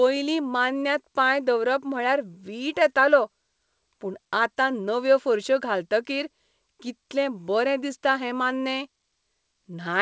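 No technical faults are audible.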